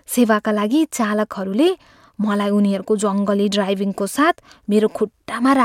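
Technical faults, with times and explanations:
No technical faults can be heard in this speech recording. Nothing in it calls for a time or an explanation.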